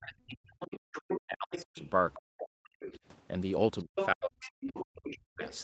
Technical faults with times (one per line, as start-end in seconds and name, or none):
0.00-0.05 other side's voice leaking through
0.02-2.87 speech suppressed in double talk
0.60-1.79 other side's voice leaking through
2.64-2.99 other side's voice leaking through
3.79-5.64 other side's voice leaking through
3.82-5.64 speech suppressed in double talk